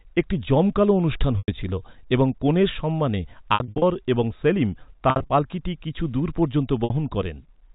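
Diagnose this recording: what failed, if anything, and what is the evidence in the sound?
Network stage, packet loss with pitch repetition, over the G.711 telephone path: at 1.39 s after "একটি জমকালো অনুষ্ঠান", 3.54–3.82 s, 5.10–5.30 s before "পাল্কিটি কিছু দূর পর্যন্ত", and 6.84 s, the sound goes briefly buzzy and held as the receiver loops the last pitch period across gaps of up to 100 ms.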